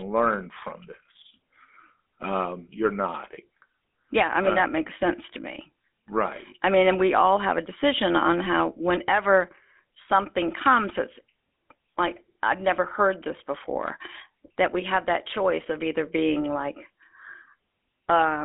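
GSM full-rate codec damage runs throughout: the encoder models the vocal tract and drives it with sparse, regularly spaced pulses, so speech sounds plainly buzzy and gravelly, confined to about 250 Hz to 3.5 kHz, nothing above 3.8 kHz, fitting a 13 kbps stream.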